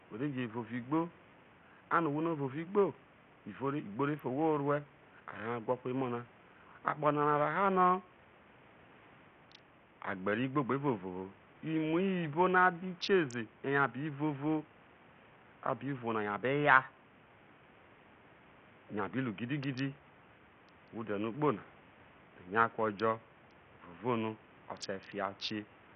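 Bluetooth SBC compression runs throughout the speech. Nothing survives above 13.5 kHz, and what remains sounds gritty with aliasing. The heavy damage likely comes from an SBC link starved of bits, consistent with about 48 kbps. The room noise sits about 29 dB down.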